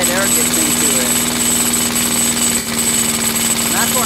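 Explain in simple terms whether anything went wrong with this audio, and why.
Yes, from 2.59 to 2.68 s there is AAC frame loss with concealment. A few compressed chunks, about three frames' worth, went missing, and the player patched the gap with a blurred, hissy copy of the preceding sound. That smeared filler, rather than a clean silence or click, sets it apart from a plain dropout.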